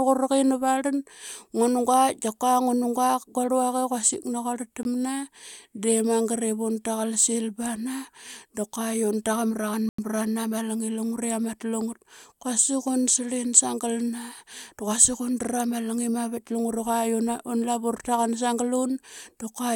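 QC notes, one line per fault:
4.83–4.85 s and 9.89–9.98 s, Bluetooth stall. The speech cuts to silence twice, for about 19 ms and then 95 ms, and then carries on. The likely cause is a wireless link that held packets back. The headphones' buffer ran empty, so playback had nothing to play and paused. Sound returned once the resent packets arrived. The first gap is a brief hole. The second is longer.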